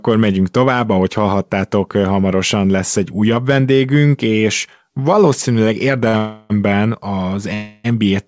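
Speech, band-limited at 8 kHz as a 64 kbps G.722 call path would be, has three timing faults. Right after "újabb vendégünk és valószínűleg", a short stall from a late packet at 6.08 to 6.16 s holds the last sound for 54 ms with a slight buzz or dip, because the jitter buffer ran empty before the packet arrived. A call audio freeze follows at 6.17 to 6.53 s, and a second one at 7.54 to 7.87 s. Each stretches the sound into a fading buzz or hiss for about 320 ms and 300 ms respectively before resuming without loss, likely because packets were held up in transit and the jitter buffer ran dry.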